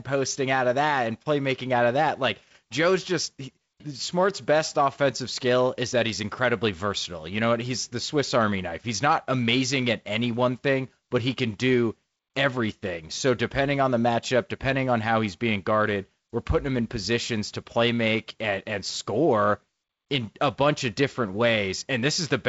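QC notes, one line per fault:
No faults found on this speech clip.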